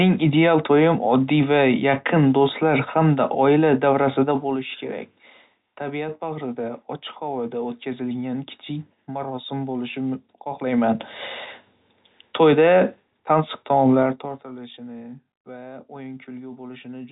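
Zipper noise occurs at 4.22–4.67 s, after "hamda oila", then at 10.53–10.93 s and 14.01–14.45 s. Level shifts jump in unsmoothed 2 dB steps, so rapid ticking rides on the speech.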